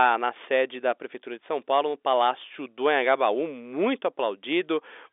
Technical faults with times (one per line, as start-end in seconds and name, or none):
none